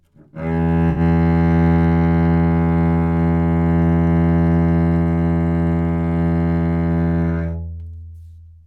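From 0.90 to 1.00 s a brief smeared, noisy patch appears: AAC frame loss with concealment, where roughly 64 ms, fitting three lost frames, was rebuilt from the last good spectrum.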